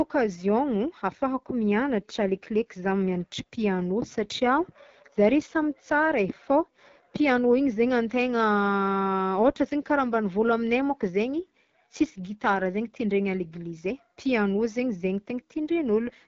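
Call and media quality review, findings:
AMR wideband (HD Voice) codec damage, whole clip: rough, raspy speech, band ending near 7.3 kHz. Distorted pulse-driven vocal tract model, consistent with the 8.85 kbit/s mode. Unlike narrowband AMR, low highs persist; unlike a plain low-pass, the roughness is clearly audible.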